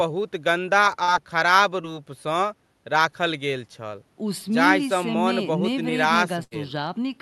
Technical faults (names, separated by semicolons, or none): short concealed packet loss; burst of packet loss